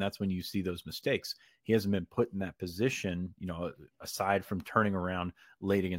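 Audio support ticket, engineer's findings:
No faults found in the speech recording. Nothing audible points to a failing component in the capture or playback chain.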